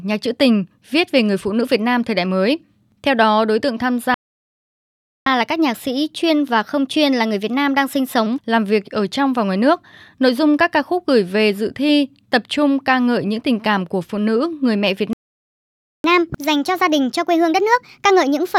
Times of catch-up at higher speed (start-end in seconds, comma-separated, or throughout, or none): 5.26-8.26, 16.04-18.59